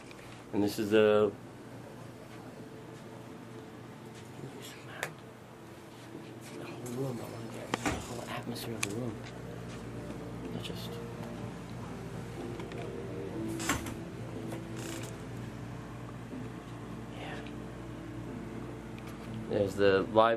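Nothing stood out as a fault on listening to this clip.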